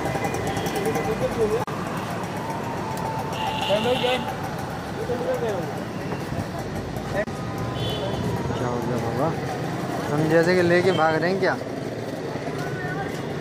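At 1.64 s and again at 7.24 s there's a gap at a join of encoded pieces, brief silent dropouts of about 35 and 30 ms where separately encoded chunks got butted together untrimmed.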